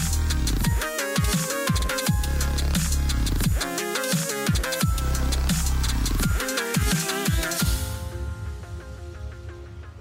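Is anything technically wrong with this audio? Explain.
Yes. The audio shows overlapping chunks, at 1.82 to 1.87 s and again at 5.87 to 5.92 s. It was handled in blocks of 4.0 s, and each new block began about 50 ms before the previous one finished, so that sliver of material is played a second time at every join. The result is a brief stutter or click at each boundary, recurring at the 4-second spacing of the blocks.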